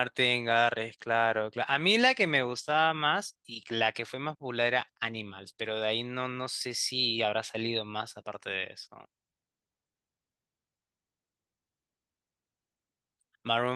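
No technical faults can be heard anywhere in the speech recording.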